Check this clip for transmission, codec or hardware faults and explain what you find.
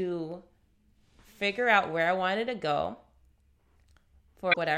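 One fault is present, late in the speech: damaged data in the compressed stream from 4.51 to 4.57 s. Corrupted bytes in that stretch cause the decoder to misread those frames, lose its lock on the frame structure and hunt for the next valid header, so about 65 ms of output is disrupted. It is heard as a brief glitch. On a spectrogram it shows as a narrow vertical disruption, and on the waveform as an abrupt discontinuity.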